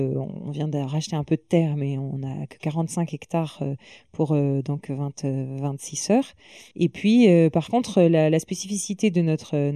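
From start to finish, the speech carries channel delay (comb filtering). One channel trails the other by roughly a third of a millisecond, and when the two are summed to mono, energy common to both cancels at evenly spaced frequencies. The first notch sits around 1.5 kHz, with further notches at regular steps above it, so the speech sounds hollow and phasey. A spectrogram shows steady dark horizontal bands across the whole clip. The waveform itself looks largely ordinary.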